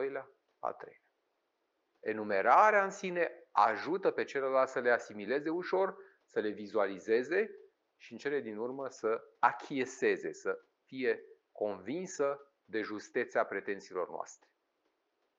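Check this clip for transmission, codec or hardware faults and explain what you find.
No transmission, codec or hardware faults.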